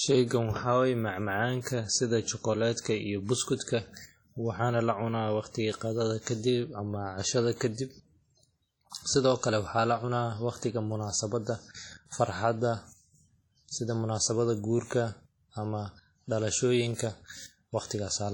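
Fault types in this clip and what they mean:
WMA compression: heavy ringing, washy smearing and hiss that breathes with the speech throughout, nothing above 19.2 kHz; likely a low-bitrate WMA encode, around 32 kbps.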